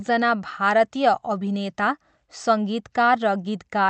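No technical faults are audible in this speech.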